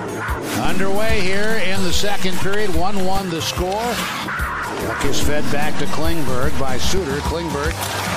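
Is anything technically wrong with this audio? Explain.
Yes. There are two DC steps, from 0.65 to 3.18 s and from 5.05 to 6.98 s. Each time, the waveform's zero line suddenly jumps by about -12 dBFS of constant offset, as happens when a converter recalibrates or an offset input is switched in. Those abrupt baseline shifts are heard as low thumps or clicks at 0.65 and 5.05 s, while the sound itself continues unchanged.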